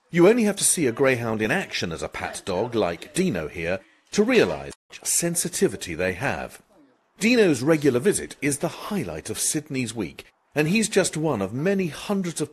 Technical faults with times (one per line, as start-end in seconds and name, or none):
4.69-4.91 damaged data in a compressed stream